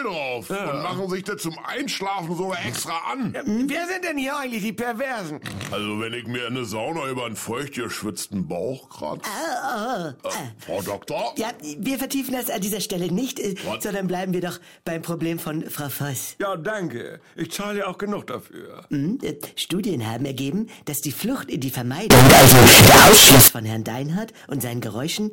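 From 22.10 to 23.48 s, the audio turns into very loud, harsh distortion. The likely cause is signed and unsigned mixed up, flipping the top bit of 16-bit samples.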